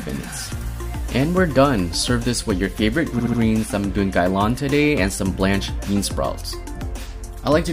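From 3.18 to 3.39 s, repeated frames cause a stutter: a 69.7 ms block plays three extra times, adding 209 ms to the audio. On a spectrogram, identical short patterns sit side by side.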